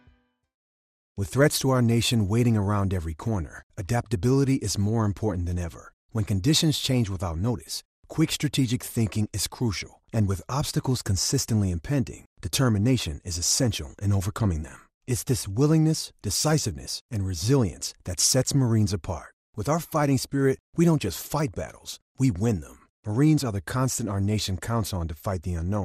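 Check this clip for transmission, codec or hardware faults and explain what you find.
There's one codec problem, and it runs through the whole speech clip. It sounds like MP2 compression, likely at a low rate, something like 80 kbps. With that few bits, upper sub-bands drop out and flicker back, and the rest are quantised coarsely, so everything comes across dull, with a gurgling, grainy edge all the way through.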